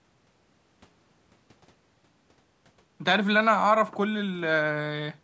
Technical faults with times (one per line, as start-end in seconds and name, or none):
none